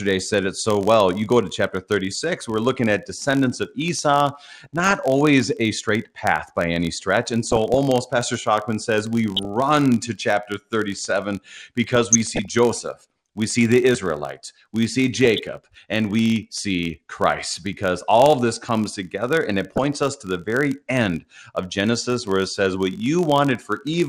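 Speech, heard throughout through a dull, band-limited sound with a gurgling, granular texture, which is the signature of MP2 compression, likely at around 80 kbps. Too few bits forces whole upper sub-bands off, and the remaining bands are coarsely quantised and flicker in and out, so the top end comes and goes rather than being cleanly low-passed. That flicker and granularity separate it from simple filtering or a lower sample rate.

Under everything runs a steady buzz at 46.9 Hz, caused by a filter restarted on every block. The filter loses its state at each block boundary and starts again from silence, leaving a small transient at the start of every block. The rate fits a 1024-sample block. Because each tick is triggered by the signal, the buzz rises and falls with the speech level and drops away in pauses, unlike mains hum, which keeps a fixed level.

Layered on top are six bursts of DAB burbling, at 4.64–4.93 s, 7.43–7.78 s, 9.36–9.45 s, 11.93–12.45 s, 15.25–15.47 s and 19.72–19.98 s. 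These point to a small fraction of bit errors slipping past error correction into the MP2 data, putting short blips of noise in single sub-bands. They are brief and erratic, whereas the codec's dullness is constant.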